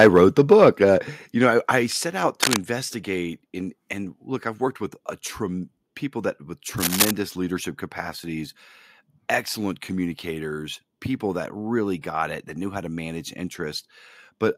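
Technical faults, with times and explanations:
0.00–0.69 s, microphone overload: The input gain was likely set too high, driving the loudest peaks about 6 dB past the converter's ceiling. Around one and a half percent of samples have flattened tops, giving the opening speech a harsh, crackly edge.
1.02 s and 2.04 s, microphone volume stepped down: The call software likely reacted to the overloaded input by cutting the device's gain in single jumps, about 6 dB at 1.02 s, just before "you know I I", then about 3 dB at 2.04 s, right after it. Speech and background drop abruptly together.
2.42–2.58 s and 6.78–7.11 s, cable scratch noise: A worn cable, connector or control was likely disturbed, making its contact resistance flicker rapidly. Dense, irregular scratching bursts, roughly 5 dB above the speech, sit over the sound. The second falls between "people that with" and "leadership capacities".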